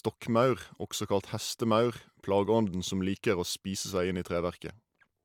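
A short speech recording with nothing technically wrong to report.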